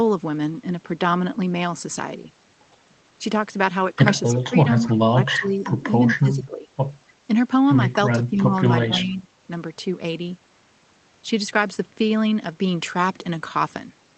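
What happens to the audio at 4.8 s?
From 4.83 to 4.91 s, a brief echo leak slips in: a faint copy of the speech returns about 286 ms after the original, roughly 20 dB below it. The likely cause is a far-end loudspeaker whose echo canceller let a scrap of its microphone pickup travel back down the call. Unlike room reverberation, which smears continuously right behind the sound, this is a distinct delayed repeat with a clear gap, lasting only about 80 ms before vanishing.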